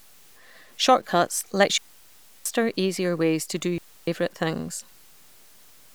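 Low bit depth without dither runs through this whole speech recording: a grainy distortion that tracks the level, roughening quiet syllables and sputtering in the softest moments, sitting roughly 35 dB below the signal. It is likely caused by truncating to about 8 bits with no dither, so the rounding error follows the waveform instead of forming a steady hiss. Digital wireless dropout mutes the audio from 1.78 to 2.46 s, about 0.68 s, ending just before "easier ways to do", and again from 3.78 to 4.08 s, about 0.29 s, right after that phrase. Each gap is a clean near-silent hole with no noise burst at either edge, which is how a receiver behaves when it loses too much data and quickly fades to mute.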